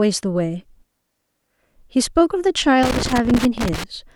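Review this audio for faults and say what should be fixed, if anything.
An irregular burst of crackle and scratching breaks into the speech from 2.83 to 3.84 s, about a second of chopped, spitting sound. That is loose connector crackle: a worn or dirty contact in the signal path kept making and breaking as the cable or plug moved, cutting the signal in and out. Cleaning or replacing the connector and securing the cable so it cannot shift would prevent it.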